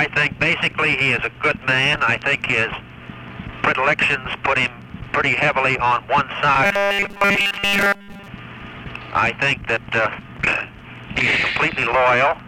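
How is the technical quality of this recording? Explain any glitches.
The recording has one glitch. From 6.64 to 8.28 s there is robotic sound from repeated short buffers, likely from audio arriving too slowly, with roughly 5 ms chunks looped over most of the stretch. The result is a rigid, metallic 200 Hz buzz.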